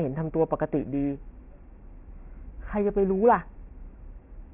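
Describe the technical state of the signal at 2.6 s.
At 2.6 s, as throughout, aliasing is present. Content above 3 kHz folds back as gritty, unrelated tones, roughly 30 dB down, consistent with unfiltered resampling to 6 kHz.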